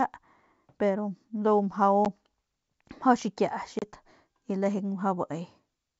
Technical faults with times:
2.05 packet loss on an ADPCM call
3.79-3.84 packet loss on an ADPCM call

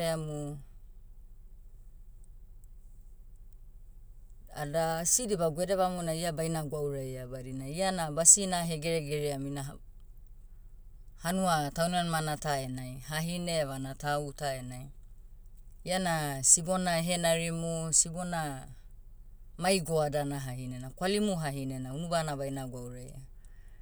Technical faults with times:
0.68-21.91 clock drift buffer slips

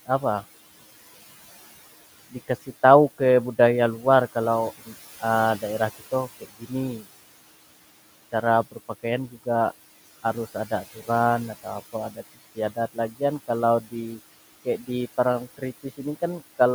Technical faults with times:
0.00-16.74 noise suppressor artifacts
6.41-6.71 speech cut by the noise suppressor

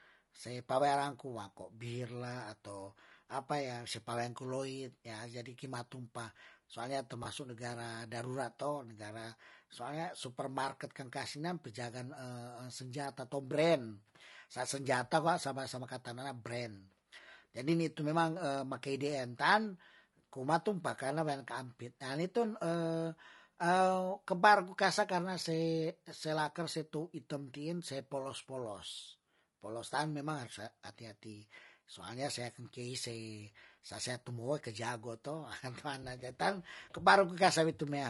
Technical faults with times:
0.00-38.09 low-delay AAC compression
7.23-7.26 AAC frame loss with concealment

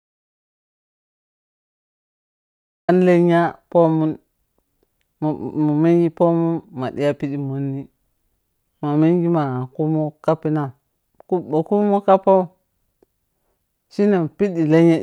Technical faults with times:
0.00-2.88 audio dropout to silence

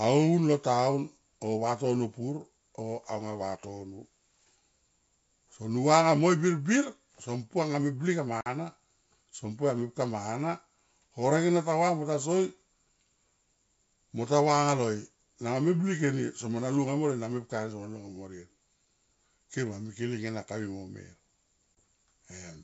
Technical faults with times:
8.41-8.47 packet loss on an ADPCM call
21.78 packet loss on an ADPCM call

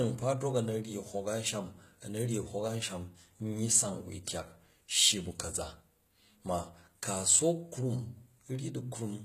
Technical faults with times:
0.00-9.25 HE-AAC compression

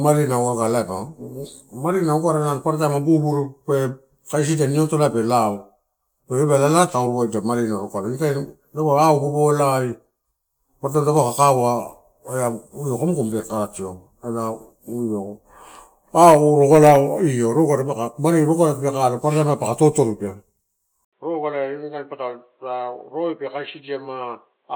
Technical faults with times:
21.05-24.76 input switched to a poorer device

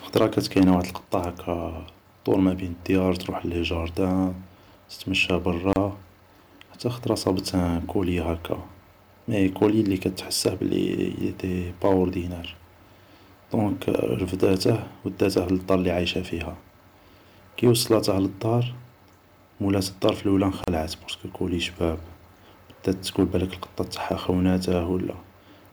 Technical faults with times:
5.73-5.76 gap at a join of encoded pieces
20.64-20.68 gap at a join of encoded pieces

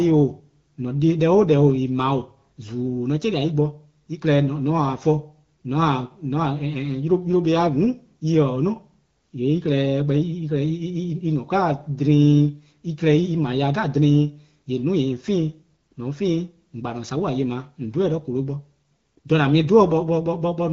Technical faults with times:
none

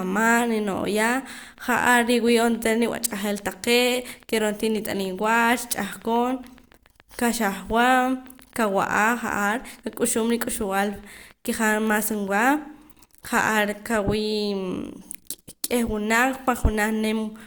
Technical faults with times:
0.03-12.28 train of clicks

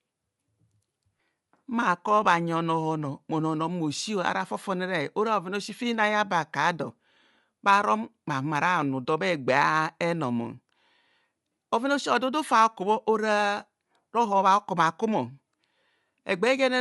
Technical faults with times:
0.00-16.81 Bluetooth LC3 compression

